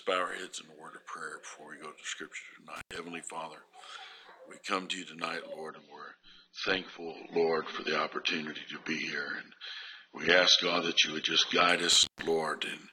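At 2.76 s the sound drops out abruptly, with a crackle on either side of the gap. For about 95 ms only faint hiss remains before it returns at 2.96 s. This is an intermittent contact: a loose plug or cable briefly loses connection, so the signal vanishes, and the scraping of the contacts as they open and close produces the crackle.

From 5.69 s the treble suddenly thins out with no gap. Nothing survives above about 6.3 kHz. That continues until 11.69 s, when the fuller sound snaps back. This is an adaptive stream at a lower bitrate: when the connection slowed, the player switched to a leaner encoding, which fits a drop from about 96 kbit/s to about 24 kbit/s AAC. The encoder then discarded high frequencies and coded the rest more coarsely.

At 11.92 s the intermittent contact happens again. The sound cuts out with edge crackle for about 160 ms, leaving hiss until 12.27 s.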